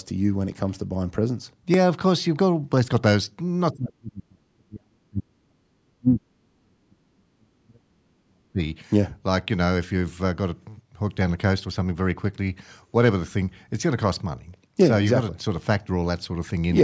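Dropped samples at 1.74 s produce a single sharp click in the speech, a thin vertical line across the spectrum. The waveform jumps abruptly from one value to a later one, which most likely means a tiny stretch of samples, roughly a millisecond's worth, went missing from the stream. The gap is far too short to take away any audible sound. All that remains is the discontinuity itself, heard as one isolated tick.

Speech suppressed in double talk runs from 3.72 s to 8.60 s, with about four seconds of the speech affected in total and the deepest drop around 40 dB. The likely cause is an echo canceller that could not tell this talker apart from the far side's audio playing on the loudspeaker, so it turned both down. The voice dips, loses its top end or breaks into pieces through this stretch. Throughout, the call's high-pass filter trims the lowest bass, as intended.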